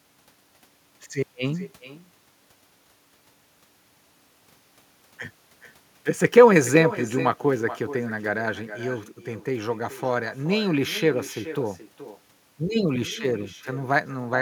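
Speech with echo and no canceller throughout: a discrete copy about 13 dB down returns around 0.4 s later. That separate repeat, not a smooth decay, distinguishes it from room reverberation.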